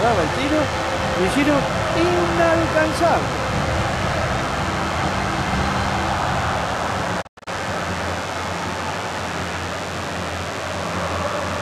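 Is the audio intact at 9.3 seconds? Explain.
No. DECT cordless phone buzz is present at 9.3 seconds, as it is for the whole clip. A nearby DECT handset or base station sends a short radio burst every 10 ms, and the audio circuitry rectifies it into the signal path. The result is a steady, thin buzz at 100 Hz with a dense ladder of harmonics, sitting roughly 15 dB below the main sound.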